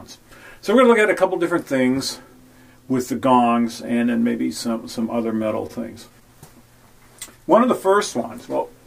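Sample clock jitter runs from 4.07 to 7.54 s. The converter's clock wanders by a few microseconds, so each sample lands slightly off time, and the error tracks the waveform's slope. The result is a hiss-like roughness sitting very roughly 35 dB below the signal.

Repeated stalls (stutter) fall between 5.01 and 5.71 s: six brief holds where late-arriving packets left the jitter buffer empty and the last sound was extended, about 70 ms in all, the longest 26 ms. Nothing is lost, but the audio drags and stutters.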